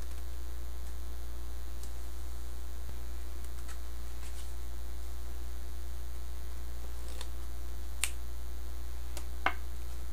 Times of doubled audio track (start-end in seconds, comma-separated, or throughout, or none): none